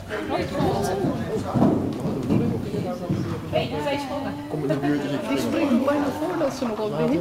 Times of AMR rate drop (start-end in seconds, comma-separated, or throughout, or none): none